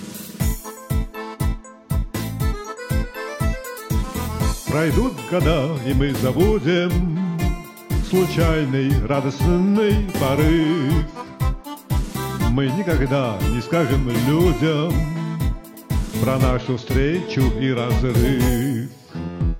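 No technical faults can be heard anywhere in this audio. Nothing in the recording or playback chain calls for comment.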